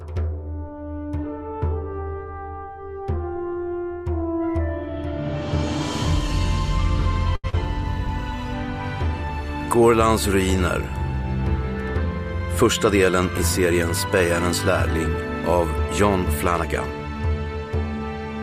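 At 7.35 s there's a short stall from a late packet. The jitter buffer ran dry, so the receiver held the last bit of sound for about 82 ms until the packet turned up, then picked up where it left off. Nothing's lost, but you hear a stretched, faintly buzzy hold up to 7.46 s.

Right after, from 7.50 to 7.55 s, comes a short concealed packet loss. About 60 ms of audio never made it to the decoder in time, and the receiver papered over roughly 32 ms of that by extending the previous sound before blending back in. That catches up around 30 ms of the delay from the stall, and it comes across as a quick smear or wobble.

Later, between 12.39 and 13.20 s, there's a jitter buffer speed-up. The buffer had more audio queued than it wanted, so the receiver snipped out tiny pitch-period-sized pieces over and over, trimming somewhere around 50 ms in total. Playback runs about 5% fast at unchanged pitch, so that stretch feels a touch rushed.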